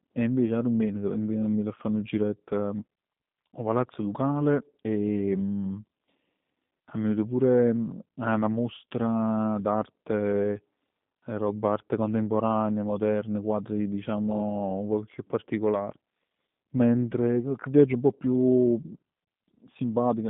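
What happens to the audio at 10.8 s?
At 10.8 s the speech carries G.729 codec damage that runs through the whole clip: rough, buzzy, synthetic vowels from 8 kbit/s pulse-based resynthesis, limited to 150 Hz–3.7 kHz, unlike plain filtering, which stays smooth.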